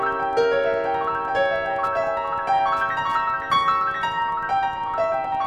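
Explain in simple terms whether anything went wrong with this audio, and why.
Yes, something went wrong. Throughout the music, from start to finish, there is a faint, steady ticking at about ten clicks per second. This is Wi-Fi interference. A wireless radio near the audio equipment sends a short signal every 102.4 milliseconds, and the audio circuit picks up each burst and turns it into an audible tick. The ticking sits well below the music, so it is quiet.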